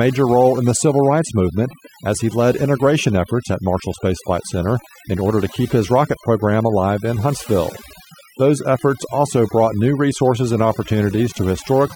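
Overdone noise removal runs through the whole recording. A noise reduction stage was set too strong. It cuts frequency bands near its noise estimate and takes quiet parts of the speech with them. The background drops and breaks up into twinkling specks.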